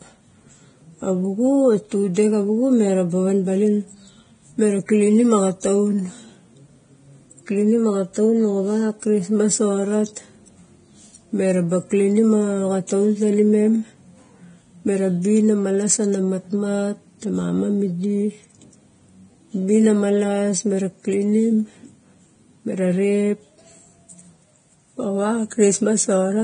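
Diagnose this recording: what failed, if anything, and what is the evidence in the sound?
Codec stage. The speech sounds hissy and grainy throughout, with nothing above 9.7 kHz. This is likely heavy Vorbis compression at a rate near 22 kbps.

Pre-echo, also at the codec stage. A brief hiss comes just before the attacks at 12.87 s, after "klinim a", and at 25.50 s. Quantisation noise spread across each block leaks about 19 ms and 12 ms ahead of them.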